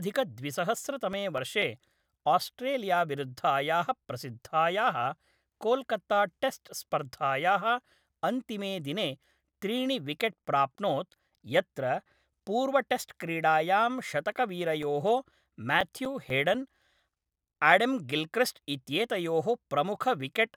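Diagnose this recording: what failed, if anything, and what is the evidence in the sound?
Playback from a scratched CD failed: on each revolution the damaged spot wiped out more data than error correction could rebuild, so the player patched the gap by interpolating or muting samples. In this speech, that produces CD scratch ticks in two bursts. There are seven between 0.64 and 2.11 s, none longer than a few milliseconds, and ten between 14.83 and 17.03 s, the longest approaching 7 ms. Both bursts repeat at roughly five per second, matching the disc's rotation.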